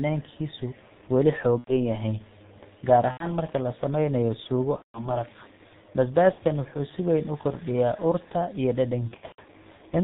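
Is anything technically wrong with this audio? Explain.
Yes. The speech has two technical faults.

Throughout, it carries heavy G.723.1 codec damage. The sound points to this early telephony codec at its 6.3 kbit/s mode. It works in 30 ms frames and keeps nothing above 4 kHz. Its model of the voice is refreshed slowly and coarsely at this rate. So the speech sounds muffled and hoarse. Consonants smear into one another and lose their edges.

There are five stretches of VoIP packet loss concealed by the speech codec. They fall at 1.59 to 1.73 s, 3.11 to 3.29 s, 4.76 to 5.14 s, 6.32 to 6.41 s, and 9.08 to 9.41 s. The first two each lose about 90 ms, which fits three missing frames. The one at 4.76 s loses 180 ms, and the one at 6.32 s loses 60 ms. The last is scattered over 300 ms, with 210 ms lost and a longest gap of 120 ms. In each gap the decoder repeats its last pitch and filter at falling gain. 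The speech stretches into a fading buzzy tone or coloured noise. Each frame builds on the previous one, so the voice stays weak and distorted briefly after each gap.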